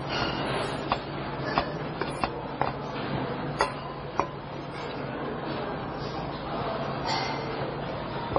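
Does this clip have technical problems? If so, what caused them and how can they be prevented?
Yes. Transcoding between lossy codecs runs throughout the clip. Nothing is heard above 10.5 kHz, and two layers of compression damage overlap: the artefacts of both codecs are heard together. This is likely the result of a very low-rate MP3 encode, around 24 kbit/s, being re-encoded as AAC-LC at around 32 kbit/s. The AAC stage spent its small budget reproducing the MP3's artefacts and added its own, while the lowest bandwidth ceiling in the chain remained. To prevent it, encode once from a lossless source at an adequate bitrate rather than converting one lossy file into another.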